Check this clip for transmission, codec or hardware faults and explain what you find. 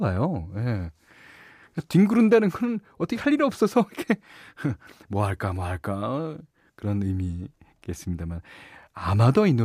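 The speech signal comes through intact, with nothing in it that points to a problem in the transmission path, the coding or the playback hardware.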